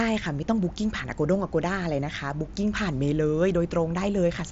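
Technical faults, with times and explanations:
No technical faults can be heard in this speech.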